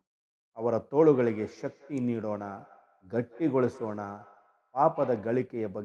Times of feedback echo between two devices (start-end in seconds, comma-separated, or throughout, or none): 1.01-5.48